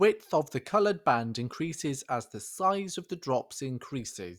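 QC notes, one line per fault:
No fault was found anywhere in the speech. Nothing in it called for a QC line.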